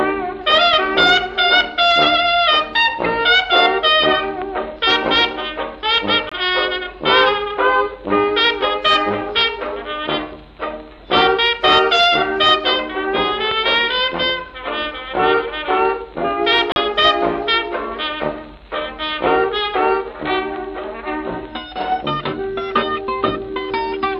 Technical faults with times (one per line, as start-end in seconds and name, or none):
6.29-6.32 Bluetooth stall
16.72-16.76 Bluetooth stall